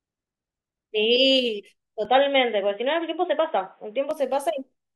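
An input switched to a poorer device from 2.05 to 4.11 s: the speech abruptly turns dull and boxy, with nothing above 3.8 kHz, then clears again. There is no gap at either switch and the level stays about the same, though a faint new noise floor sits well below the speech. The cause is likely a change of microphone or a headset call profile.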